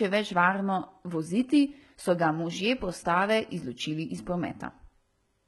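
Heavy HE-AAC compression runs throughout, with nothing above about 11.8 kHz. The likely cause is treble rebuilt from copied lower bands, making sibilants gritty and metallic.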